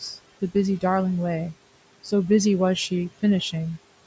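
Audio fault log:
throughout, noise suppressor artifacts: the room noise, sitting about 20 dB below the speech, drops by about 18 dB in the pauses and returns beneath the talking. The suppressor judges frame by frame which frequency bands contain only steady noise and attenuates them, so the background floor pumps in step with the speech instead of holding a constant level. The absence of content above 8 kHz comes from the call's microphone processing.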